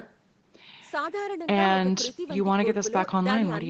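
Speech recording; no technical faults can be heard.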